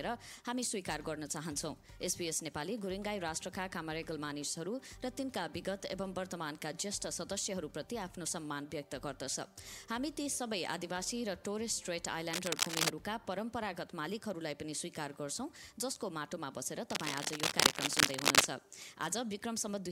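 Bursts of dense, uneven scratching sit over the sound from 12.3 to 12.9 s and again from 16.9 to 18.5 s, rising a little above the signal. This cable scratch noise is likely a worn cable, connector or control shifting and rapidly changing its contact resistance.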